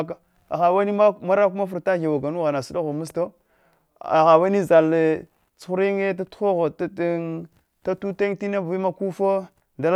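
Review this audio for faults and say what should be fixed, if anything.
No faults turn up in the audio, so nothing needs to be fixed.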